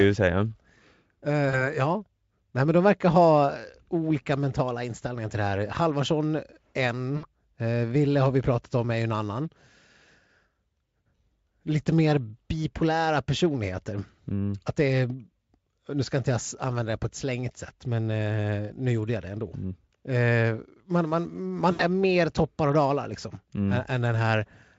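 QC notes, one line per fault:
1.49–1.70 s, 7.17–7.25 s, 21.71–21.81 s: VoIP packet loss concealed by the speech codec. The decoder bridges 40, 60 and 80 ms gaps, likely two to four 20 ms frames, by extending its last pitch and filter, giving a buzzy smear that fades and stays weak until recovery.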